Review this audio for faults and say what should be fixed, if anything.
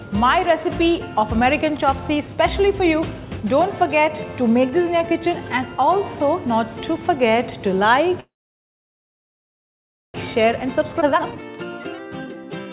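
From 8.2 to 10.16 s there's a call audio freeze: the last sound trails off into about 1.85 s of silence, likely from packets stalling and the jitter buffer running dry.

Right after, from 10.25 s to the end, a jitter buffer speed-up kicks in. Playback runs at about 126% with pitch unchanged, trimming roughly 0.7 s of backlog.

At 11.00–11.03 s there's a skip ahead: around a second of audio vanishes and the two sides are butted together with just an 8 ms fill.

The whole thing sits on a G.711 call path, so nothing comes through above 4 kHz. That's expected for the codec.

To prevent this, fix the network stall behind the freeze, and give the jitter buffer more headroom so it drains gradually instead of dropping chunks.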